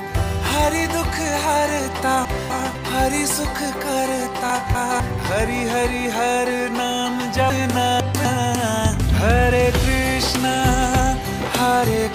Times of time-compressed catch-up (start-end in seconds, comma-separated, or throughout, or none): none